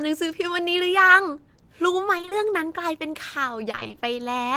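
Repeated packet loss strikes twice, from 2.17 to 2.33 s and from 3.71 to 4.03 s. Short runs of audio, none longer than 20 ms, go missing and are patched by stretching the preceding sound, so about half of each stretch turns choppy and robotic.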